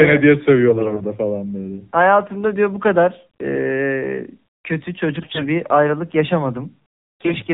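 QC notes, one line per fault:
throughout: AMR narrowband mobile codec. All of the speech is band-limited to telephone width, with nothing above 4 kHz, so sibilants and breath detail are gone. At this low bitrate, which sounds like the 7.4 kbps mode, the vocal-tract model is driven by only a sparse set of pulses per subframe. This gives the voice a plainly audible buzzy, synthetic edge.
0.68–1.02 s, 5.20–5.47 s, 7.21–7.36 s: AMR bit errors. In three short bursts the voice keeps roughly its pitch and loudness but turns hoarse, scratchy and gargly. The first burst ends just before "falan böyle" and the second, the harshest, just before "bir ayrılık". Flipped bits in the weakly protected part of each frame put the excitation pulses in the wrong places and skew the fine pitch, gain and spectral values.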